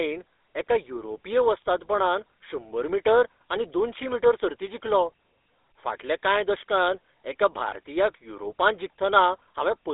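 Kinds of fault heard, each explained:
GSM full-rate codec: The whole clip carries the buzzy, gravelly roughness of the original GSM speech codec, which rebuilds the voice from a vocal-tract model driven by a sparse, regularly spaced pulse excitation. That damage is plainly audible here, and the sound sits inside a narrow line band of about 300 Hz to 3.7 kHz, consistent with 13 kbps full rate. The grainy, rasping texture distinguishes it from a plain band-limited telephone line, which sounds muffled but smooth.
Lost GSM frames: From 7.68 to 7.73 s the speech briefly freezes into a rough, metallic ring lasting about 40 ms. The decoder repeated the last good frame's settings, and the length fits two lost 20 ms frames. Unlike a dropout, the gap is not silent. Unlike a click, it is not a sharp tick. It is a short, held, tonal smear that is too brief to fade out entirely.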